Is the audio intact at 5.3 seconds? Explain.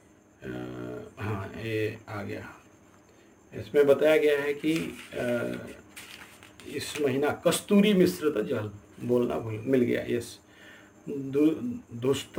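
No. At 5.3 seconds, as across the whole clip, there is sample clock jitter. The converter's clock wanders by something like 10 microseconds, so each sample lands slightly off time, and the error scales with how steeply the waveform is moving. It comes through as a grainy hiss roughly 25 dB below the signal. Unlike a steady noise floor, this roughness swells with loud and bright passages and disappears in silence.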